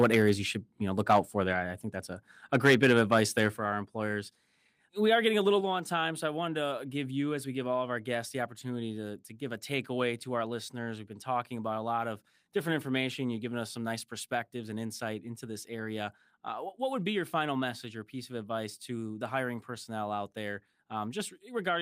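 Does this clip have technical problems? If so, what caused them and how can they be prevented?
Yes. Microphone overload is audible from 0.0 to 0.31 s, just before "you should you know", from 1.09 to 1.2 s, right after "should you know look", and from 2.54 to 3.47 s. The loudest syllables have a harsh, crackling edge, with peaks pushing about 6 to 7 dB past the converter's ceiling and a few percent of samples flattened. The likely cause is an input volume set too high, so the tops of the waveform are sliced off. Unlike a level change, the overall loudness stays the same and only the peaks break up. Lowering the microphone input gain until the loudest speech peaks sit well below full scale prevents it.

The microphone volume is also stepped down at 0.04 s by about 2 dB, at 3.57 s by about 6 dB, and at 5.61 s by about 4 dB, between "are getting a little" and "low on time so". Each is a clean, sudden drop in the level of both speech and background, with no added distortion. 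The drops likely come from the call software lowering the device's input volume after sensing clipping, as the first two come during or just after overloaded stretches. Setting a sensible input level beforehand and disabling automatic microphone gain adjustment prevents these jumps.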